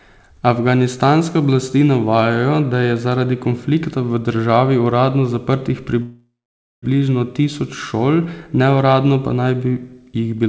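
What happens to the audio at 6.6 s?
Around 6.6 s there is silence: from 6.02 s the sound trails off as a fading buzz, then resumes at 6.85 s with "tisoč šol neuradno pa". A call audio freeze, likely delayed packets emptying the jitter buffer; nothing is lost, only delayed.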